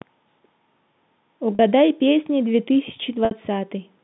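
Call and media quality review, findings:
Brief buzzy held tone at 1.55–1.59 s (40 ms) and 3.25–3.31 s (60 ms, fading toward silence). Packet loss with pitch repetition: receiver concealment loops the last pitch period, consistent with lost 10 ms packets.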